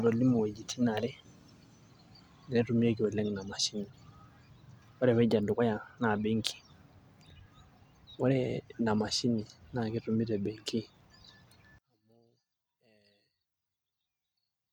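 A speech clip whose last stretch, from 11.78 s to the end at 14.72 s, collapses to a faint trace about 36 dB down, the centred voice nearly cancelled. The likely cause is one channel inverted in polarity, so summing the near-identical channels to mono wipes out everything they share.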